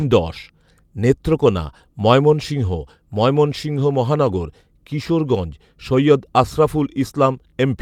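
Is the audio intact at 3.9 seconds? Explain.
Yes, the speech plays through cleanly at 3.9 seconds, with no dropout, click, distortion or other fault at that moment.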